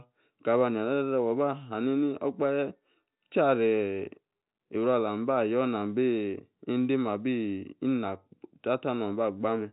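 Nothing goes wrong anywhere in the recording, and the speech simply carries the narrow, boxed-in sound of G.711 telephone coding, with nothing above about 3.8 kHz getting through.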